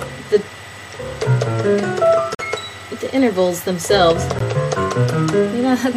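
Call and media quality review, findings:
Gap between stream segments: hard-edged silent holes at 2.35–2.39 s (44 ms) and 4.39 s (16 ms), about 2 s apart, matching the segment length. Segment timestamps leave small gaps that the player fills with silence. Unlike packet-loss dropouts, nothing is missing; the audio resumes intact, just later.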